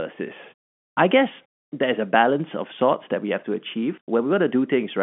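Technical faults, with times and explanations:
There are no technical faults here, so there are no times or explanations to give.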